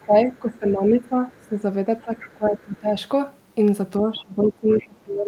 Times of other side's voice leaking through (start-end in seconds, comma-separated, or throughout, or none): 0.00-0.72, 1.32-1.47, 1.99-2.20, 4.16-4.20, 4.72-4.85